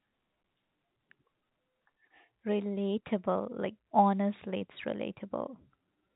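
The speech carries no technical fault, and it has the narrow telephone sound of G.711 A-law coding, with nothing above 4 kHz.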